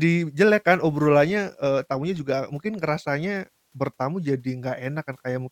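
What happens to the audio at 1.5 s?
Nothing goes wrong at 1.5 s; the speech carries on intact through that moment, with no dropout, click or distortion.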